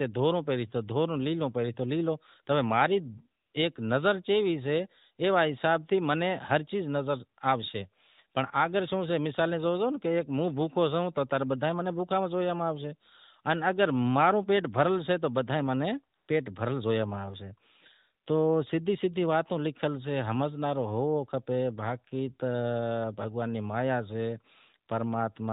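AMR comfort noise at 3.42–3.54 s, 16.16–16.28 s and 18.24–18.26 s, just before "تو سدہی سدہی واتیں": the phone judged the talker silent and stopped sending speech frames. In those gaps the real background gives way to a smooth, steady synthetic hiss, over otherwise light narrowband coding.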